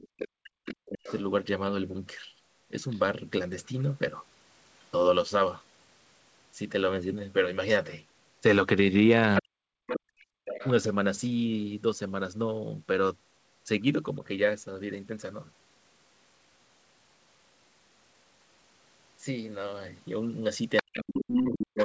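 From 0.0 to 1.21 s a second voice sits under the talker at roughly 15 dB down. This is the other side's voice leaking through, likely loudspeaker playback that the echo canceller did not fully remove from the microphone. Inside that stretch, from 0.53 to 1.07 s, the talker's own speech is pulled down in pieces by as much as about 40 dB, for roughly half a second in total. That is speech suppressed in double talk: with both sides active, the canceller likely could not tell its own talker from the echo and attenuated both.

A brief scrap of leaked far-end voice appears at 2.9 to 2.99 s, faint at roughly 30 dB below the speech. From 9.36 to 10.69 s the leak is much stronger, roughly 5 dB under the talker, and from 9.41 to 9.7 s the talker again dips by up to about 40 dB, for roughly 150 ms. From 10.0 to 10.45 s the background gated by the echo canceller becomes audible: the room sound drops by about 30 dB for roughly 400 ms while the loudspeaker plays, then returns as the canceller releases.

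From 20.77 s to the end the other side's voice comes through at about the same level as the talker. From 20.82 s to the end the talker is suppressed in double talk once more, with drops of up to about 40 dB. Throughout, the audio has nothing above 8 kHz, which fits a G.722 wideband call path.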